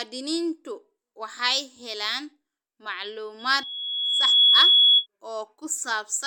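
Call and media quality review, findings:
Loudspeaker feedback squeal, 3.39–5.06 s: 3.4 kHz tone swells over about a second to roughly 15 dB above speech. Mic-to-speaker loop gain exceeds unity at that frequency.

Compressed frames skipped at 3.63 s: jump of around 70 ms, a couple of 32 ms frames. Decoder dropped missing or damaged frames.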